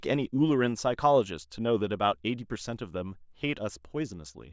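No technical faults can be heard anywhere in the recording.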